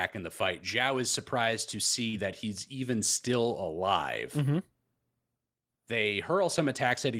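Around 2.09 to 2.15 s, between "is surprised to" and "that he's even still", about 40 ms of speech arrived too late: short concealed packet loss, heard as a brief smeared wobble.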